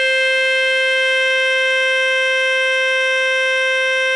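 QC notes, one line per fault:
throughout, 4-bit ADPCM compression: a gritty hiss rides on the music and swells and shrinks with its level. It comes from each sample being coded as a coarse 4-bit step from a prediction. Sharp attacks sound distorted where the adaptive step cannot grow fast enough. A stream of about 88 kbps at 4 bits per sample fits a halved sample rate near 22 kHz. Unlike a perceptual codec's swirly, warbling artefacts, this error is steady broadband noise tied to loudness.
1.16 s to the end, time-stretched section: the pace drops abruptly to about 0.65 times the original speed while the pitch stays where it was. The slowed part drags, likely because software lengthened the audio by repeating short pieces to fill a set duration. That is what separates it from a tape or playback slowdown, where the pitch would fall along with the tempo.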